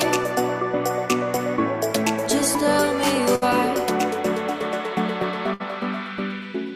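A burst of packet loss strikes twice, at 3.35 to 3.43 s and again at 5.54 to 5.62 s. Each time the receiver stretches the last sound for about 60 ms, letting it fade as a held tone or hiss, then jumps ahead, skipping roughly 60 ms.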